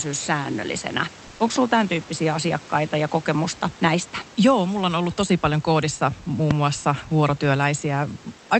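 From 1.27 to 1.39 s, comfort noise replaces the background. For about 120 ms the room's real noise gives way to a flat, featureless hiss, about 2 dB quieter. The likely cause is the sender pausing transmission during a gap in speech, with the receiver filling in synthetic noise.

A loud pop follows from 1.56 to 1.58 s, just before "tämän tyyppisiä asiakkaita ja". It is a single sharp click, roughly 5 dB above the speech. A second, louder pop comes from 6.51 to 6.53 s, right after "tosi paljon koodissa muun", about 15 dB above the speech. Both are likely sudden voltage steps, and the speech continues underneath.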